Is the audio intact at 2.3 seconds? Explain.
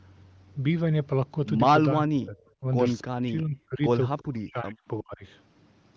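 No, 2.3 s falls inside a stretch of speech suppressed in double talk, from 1.93 to 2.38 s. The speech sinks by something like 40 dB. It's likely an echo canceller that mistook the talker for loudspeaker echo and turned everything down.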